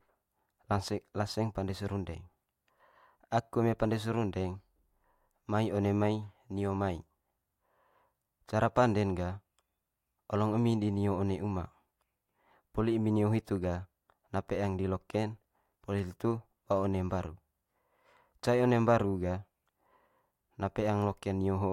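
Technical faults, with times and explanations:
15.44 to 16.00 s, processor overload crackle: A burst of gritty crackle rides on the speech for about half a second, just before "hitu ba one". The processor could not finish its small audio buffers in time. Around ten deadlines were missed over that stretch. Each miss replayed a scrap of old audio with hard edges. The short, rapid ticks suggest buffers of roughly 5 ms. The crackle stops as soon as the load passes.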